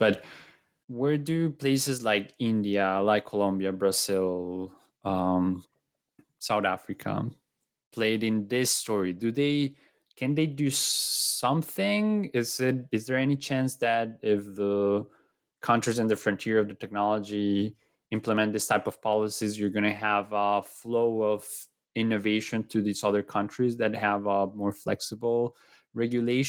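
No technical faults are audible.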